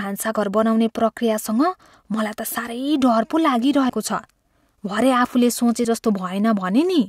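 The speech skips forward twice, at 3.89 s and 5.84 s, each time jumping past about 50 ms of sound with no gap of silence, so the talk lurches abruptly rather than pausing. The two skips fall about 2 s apart, which points to audio missing between chunks: the recording was likely processed in 2-second blocks, and a short piece was dropped each time one block closed and the next began, with the two sides spliced directly together.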